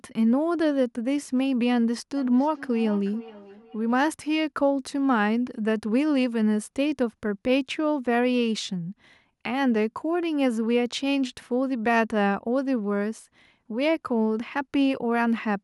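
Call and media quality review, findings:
Feedback echo between two devices, 2.16–4.02 s. Second device in the room replays the far end's audio into the first device's microphone, and neither echo canceller covers the other's playback. Speech returns at a fixed interval of roughly 0.4 s, peaking at about 19 dB below speech.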